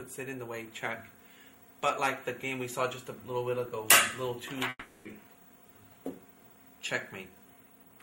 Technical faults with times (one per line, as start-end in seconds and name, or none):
4.69-5.08 long network dropout